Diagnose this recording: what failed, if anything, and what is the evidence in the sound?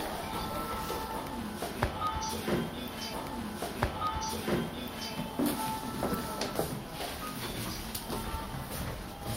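The failure is at the streaming playback stage: a stream segment repeated. At 3.13 s the audio jumps back and replays material. The repeat runs to 5.13 s, adding 2 s to the programme. A small blip marks the jump back, where the replayed segment begins. The player fetched or queued the same segment twice. The second copy is then played as if it were new, so the timeline jumps back and repeats.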